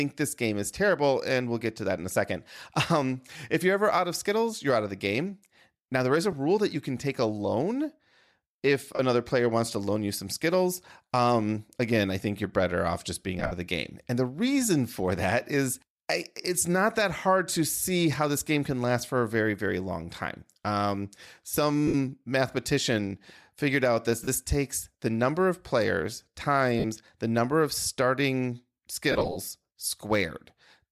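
Lost LE Audio frames break the speech at 6.32, 8.95, 13.39 to 13.52, 16.41, 21.88, 24.24, 26.80 and 29.12 to 29.37 s. The decoder refills each gap from the last spectrum with random phase. Tones become a brief noisy smear. The worst follows "the number of starting".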